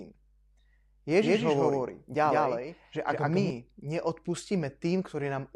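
A doubled audio track runs from 1.22 s to 3.50 s. A second, full-band copy of the speech trails the original by a fixed 150 ms at roughly equal level, likely from a duplicated capture path. It produces a dry, slapback-like smear with no room decay, switching on and off abruptly.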